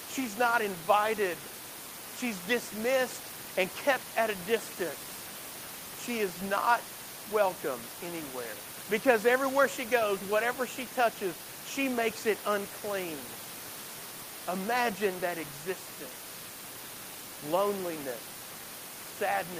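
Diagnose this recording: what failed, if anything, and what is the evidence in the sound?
Nothing failed in this recording; the only thing under the speech is the room's own background noise, about 15 dB below it.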